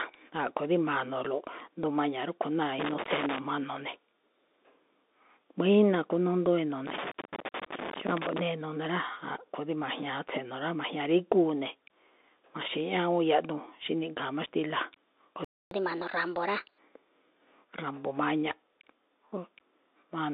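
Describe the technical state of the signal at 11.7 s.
At 11.7 s the speech carries the Bluetooth CVSD headset codec damage present throughout: a one-bit slope coder squeezes it into a band of roughly 250 Hz to 3.7 kHz, empty above 3.7 kHz, consistent with a 64 kbps stream. Scratchy s sounds and granular hiss set it apart from plain telephone band-limiting.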